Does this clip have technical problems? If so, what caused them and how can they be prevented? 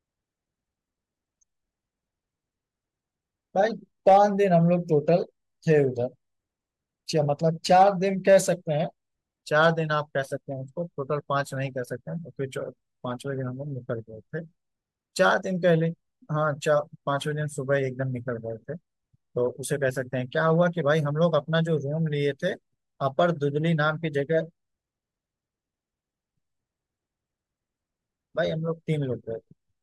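Yes. Brief crackles on loud speech peaks at 4.07–4.17, 5.71–5.78, 7.72–7.88, 8.29–8.36, 9.62–9.68 and 23.20 s are hard clipping: the peaks exceeded the stage's maximum by about 1 to 3 dB and were cut flat, adding harsh high harmonics. Lowering input gain to leave a few decibels of headroom, or placing a limiter before the converter, would prevent it.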